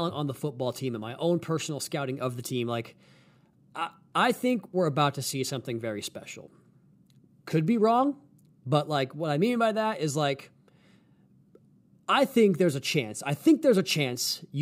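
No technical fault can be heard anywhere in the speech, which keeps the same steady, continuous signal throughout.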